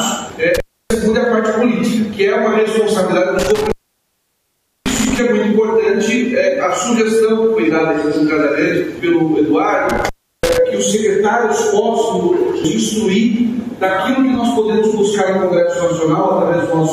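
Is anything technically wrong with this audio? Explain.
Yes, there is an intermittent contact. A loose cable or plug connection breaks and remakes the signal path three times, at 0.55–0.95 s, 3.39–5.19 s and 9.90–10.58 s, with the circuit open for about 0.30 s, 1.14 s and 0.34 s respectively. While the contact is open, the sound drops out and only faint hiss remains. Each time the connection scrapes apart and back together, it leaves crackle at the edges of the gap.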